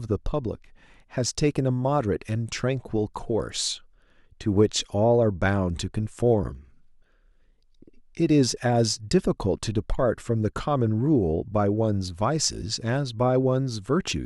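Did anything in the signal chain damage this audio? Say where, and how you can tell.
No, nothing audible in the signal chain has damaged this speech recording, and no stage from capture to playback has left a mark on the signal.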